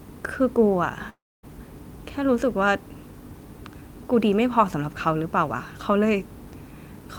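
A speech clip with a long network dropout from 1.09 to 1.45 s. The sound smears into a fading buzz, then silence, likely from lost packets. About 340 ms never returns.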